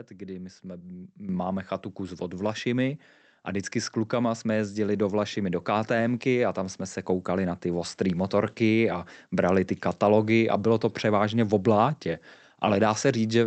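At 1.29 s, between "kdy my jsme" and "chatu kus od", the microphone volume is stepped up by about 9 dB in one jump. Speech and background rise together and stay raised, unlike the gradual swell of gain riding.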